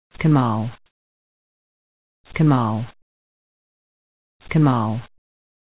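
The first 0.14 s has comfort noise in place of the background: a flat, featureless hiss about 11 dB quieter than the real ambience, which sits about 42 dB below the loud parts. It's likely discontinuous transmission filling a pause before the sound starts, on a call path that carries nothing above 4 kHz.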